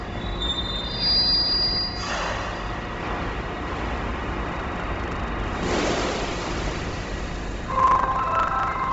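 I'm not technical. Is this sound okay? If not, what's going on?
No, not quite. The whole clip sounds dull and heavily grainy. Nothing comes through above about 7.7 kHz, and the top end has a hissy, breathy texture. That's most likely Bluetooth LC3 compression, the squeezing wireless earbuds and headsets apply, pushed hard here.

From 4.48 s to the end there's also buffer tearing. The part of the system feeding sound to the hardware has slipped out of step with it, so about 25 times a second a small slice of sound from a moment earlier gets spliced in. You hear that as a steady robotic buzz whenever something is playing.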